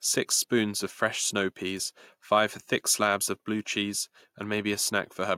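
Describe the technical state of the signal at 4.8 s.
At 4.8 s the speech signal is intact, with no audible fault at that point.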